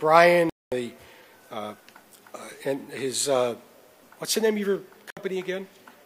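At 0.50 s the sound drops out abruptly and stays silent until 0.72 s, a gap of about 224 ms, which points to roughly seven frames lost; a second, shorter hole follows from 5.10 to 5.17 s, about 64 ms, consistent with two frames. This is a digital broadcast dropout: the receiver lost the signal or rejected corrupted frames and muted until clean ones arrived. Unlike a momentary pause, the programme resumes further along, with the intervening material simply gone.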